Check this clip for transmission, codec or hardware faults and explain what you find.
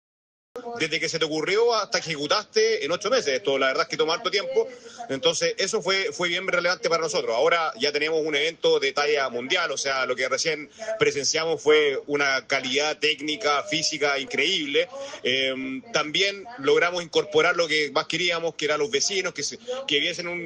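One fault: a cut-off start. Capture began late, so the clip holds digital silence from 0 to 0.56 s and then the sound appears abruptly, already mid-event. There is no natural attack or fade-in, just an instant jump into ongoing sound.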